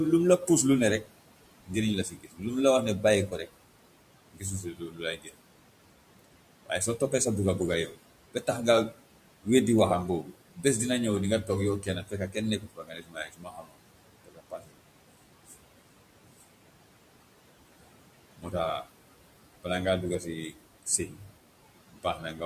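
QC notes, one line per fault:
Throughout: noise suppressor artifacts. The suppressor is pulling what it treats as steady background down by about 18 dB, deciding band by band and frame by frame. The room noise, which sits about 17 dB under the speech, dips away in the gaps and comes back up underneath the talking.
0.39–5.35 s (starting right after "lu mu la"), 6.66–16.42 s and 17.8–22.41 s: speech cut by the noise suppressor. In these stretches the suppressor mistakes parts of the speech for noise and ducks them along with the background, by up to about 18 dB (about 17 dB in the last stretch). It adds up to roughly a second in the first stretch, about two seconds in the second and a bit under a second in the third. Soft consonants and word tails come out swallowed or faint.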